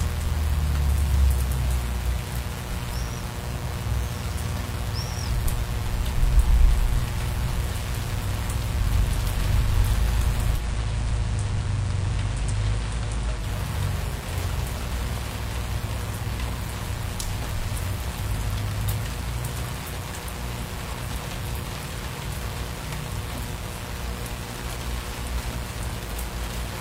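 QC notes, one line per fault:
Throughout, mains buzz: a steady, raspy 60 Hz buzz roughly 10 dB under the sound, with switching spikes spraying harmonics well up into the kilohertz range.
10.54 to 13.49 s, digital radio blending to analogue: a 137 ms crossfade to FM. Level drops about 2 dB, and hiss rises to roughly 30 dB below.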